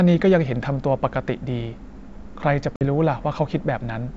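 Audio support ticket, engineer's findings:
Hard silent gap at 2.76–2.84 s, then brief distortion as audio resumes: packet loss on an ADPCM call, about 50 ms dropped, decoder predictor and step size desynchronised until re-converging.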